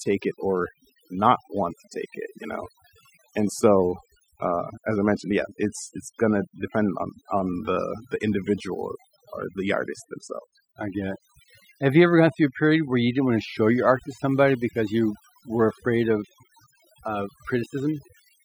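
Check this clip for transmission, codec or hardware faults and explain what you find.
One processing fault runs through the whole clip: overdone noise removal. Throughout, a noise reduction stage set far too strong pulls any frequency band near its noise estimate down to nothing, taking quiet parts of the speech with it. Pauses fall to near silence sprinkled with twinkling specks. Unlike low-bitrate codec swirl, the damage is worst where the signal sits close to the noise floor, in gaps and soft syllables, rather than spread evenly.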